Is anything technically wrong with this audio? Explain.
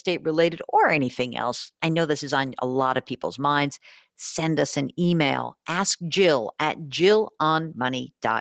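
No, nothing technically wrong stands out in this speech.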